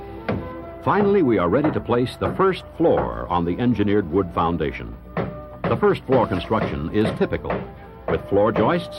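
No technical faults can be heard anywhere in the clip.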